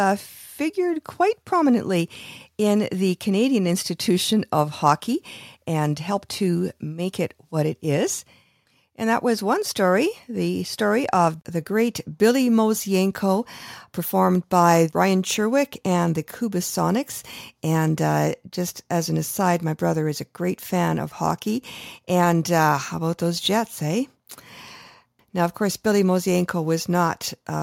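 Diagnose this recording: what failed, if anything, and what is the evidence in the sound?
Nothing in the speech signal points to a failure at any stage of the chain, from capture and conversion through transmission, storage and playback.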